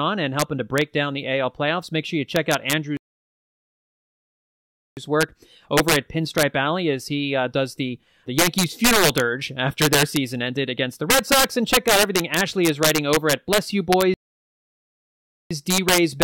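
Throughout the speech, integer overflow drives peaks about 6 dB past full scale so they wrap to the opposite sign. Loud syllables crack harshly, and the waveform shows full-height flips. From 2.97 to 4.97 s, and again from 14.14 to 15.51 s, the sound falls silent mid-flow, likely a playback stall. Both gaps appear as flat lines and blank spectrogram columns.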